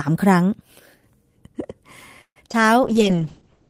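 From 2.21 to 2.38 s the sound stretches into a fading buzz or hiss, then about 80 ms of silence before resuming where it stopped, nothing lost. That points to a call audio freeze, likely late packets emptying the jitter buffer. At 2.50 s and 2.52 to 2.55 s, short concealed packet loss drops two 20 ms stretches, leaving brief smears rather than a gap, and the delay eases back slightly. From 2.84 s to the end, a call bitrate drop from 32 to 7 kbps narrows the bandwidth from 20 kHz to 8 kHz, so the sound turns muffled and watery.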